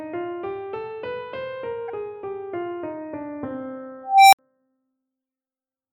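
A corrupt frame was decoded at 1.88–1.90 s. Damaged data in roughly a couple of compressed frames was played anyway, so energy lands at the wrong frequencies as a short chirp, squeak or blip peaking around -25 dBFS. Unlike a plain click, it lasts about the length of the damaged frames. At 4.03–4.39 s an unstable filter runs away. A tone near 700 Hz swells for about 0.29 s until it clips, then drops into 60 ms of silence while the filter resets. That abrupt cut-off, rather than a gradual decay, separates it from acoustic feedback howl.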